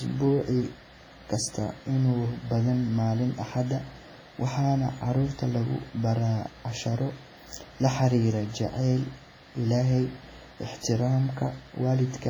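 Heavy codec damage runs through the whole speech clip. It most likely comes from WMA compression at a low bitrate; the amount of damage fits something around 24 kbps. Each block of sound is reshaped as a whole, so the error smears over tens of milliseconds. Sharp onsets ring. Quiet detail between louder parts is stripped away. The result sounds washy. A hiss rises and falls with the signal.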